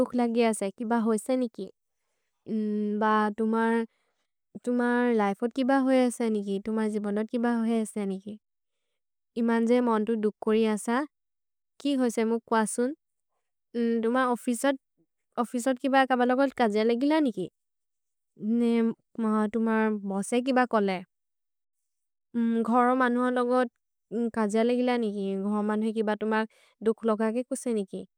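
No technical faults can be heard anywhere in the speech recording, which holds steady in level and continuity from its first moment to its last.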